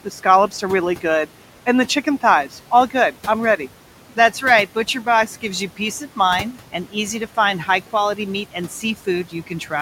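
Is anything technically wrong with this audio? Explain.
Yes, two related problems, both from noise suppression. Throughout the clip there are noise suppressor artifacts: the room noise, which sits about 19 dB below the speech, gets pushed down by about 12 dB between phrases and comes back under them, so the background pumps.

From 9.24 to 9.72 s, just after "high quality meat and", there's speech cut by the noise suppressor. It mistook quieter speech for noise and dropped it by up to about 10 dB, so roughly 150 ms of sound comes out swallowed and faint.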